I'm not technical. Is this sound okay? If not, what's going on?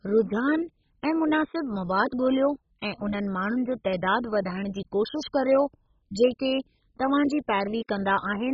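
No. Throughout, the speech sounds dull and muffled, with a gurgly, grainy edge, likely from heavy MP2 compression discarding everything above 7.5 kHz.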